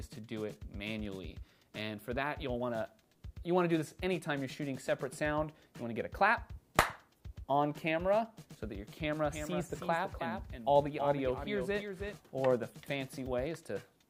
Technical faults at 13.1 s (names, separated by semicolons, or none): none